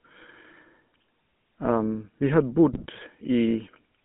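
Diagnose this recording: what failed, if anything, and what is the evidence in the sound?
The whole clip has gone through the codec stage as a GSM full-rate codec, and the damage is plainly audible. The speech has that buzzy, gravelly edge from pulse-driven excitation feeding a vocal-tract filter, with only a sparse set of excitation samples kept. The band runs from about 150 Hz to 3.4 kHz, so there's no air on top. The roughness fits the old 13 kbps full-rate scheme.

Then there are GSM bit errors from 2.72 to 2.86 s, a network-side fault reaching the decoder. Over those 140 ms the speech breaks into a squawky, gargled burst. Corrupted filter, pitch or gain parameters are bending the spectrum and throwing the level around frame by frame. The length fits roughly seven 20 ms frames getting hit on a weak radio link.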